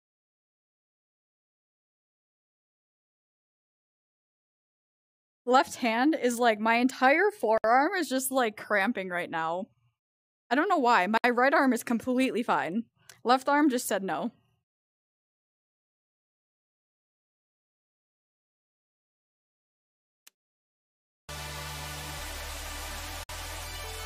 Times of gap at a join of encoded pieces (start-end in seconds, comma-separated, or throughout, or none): 7.58-7.64, 11.17-11.24, 23.23-23.29